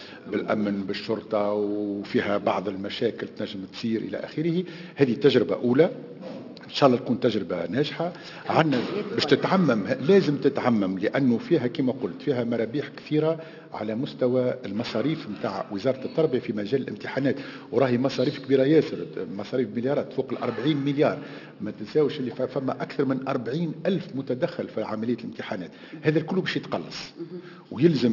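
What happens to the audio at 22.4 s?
At 22.4 s the audio carries aliasing, as it does throughout. It sounds like a drop to a 12 kHz rate with no filter first. Content above 6 kHz folds back down as false, unrelated tones, roughly 25 dB under the signal. Bright sounds turn gritty and metallic.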